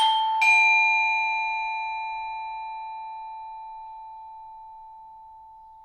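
No technical faults are audible.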